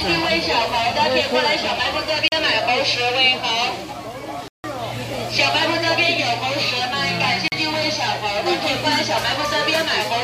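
At 2.28 s the audio drops into a block of digital silence lasting 40 ms, ending at 2.32 s. The audio cuts out, with no fade in or out, and the gap reads as a short hole. A longer 160 ms block follows from 4.48 to 4.64 s, heard as a distinct hole. A third 40 ms block, from 7.48 to 7.52 s, repeats the first short hole.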